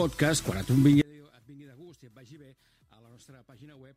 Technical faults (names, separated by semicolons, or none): one channel inverted